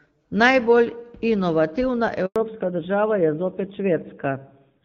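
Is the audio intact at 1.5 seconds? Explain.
Yes, at 1.5 seconds the speech is intact, with no dropout, click or other fault, just the steady sound of the AMR wideband (HD Voice) codec running normally at 12.65 kbit/s.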